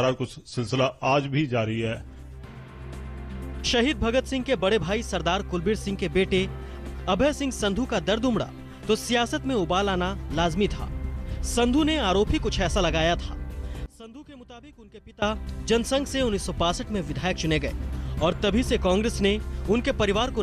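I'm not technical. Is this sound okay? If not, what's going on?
No. From 13.86 to 15.22 seconds the sound suddenly drops to a faint version of itself, then returns to normal. This is likely one channel inverted: one side of the stereo is flipped upside down, so the shared parts cancel out when both sides are combined.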